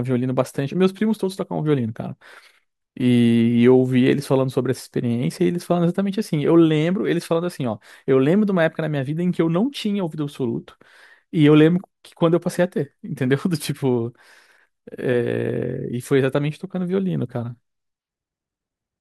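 At about 4.79 s there's a single sharp click in the speech, and it's the classic sound of dropped samples. Only a handful go missing, roughly four, well under a tenth of a millisecond. So nothing audible is lost, but the waveform jumps straight from one value to a later one, and that step is what snaps. On a spectrogram it would show as one thin vertical line. The likely cause is a brief glitch in the sample stream.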